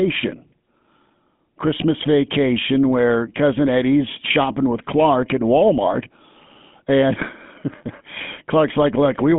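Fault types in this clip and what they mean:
GSM full-rate codec: plainly buzzy, gravelly speech with nothing above 3.7 kHz; the pulse-driven roughness, not just band-limiting, fits a 13 kbps full-rate coder.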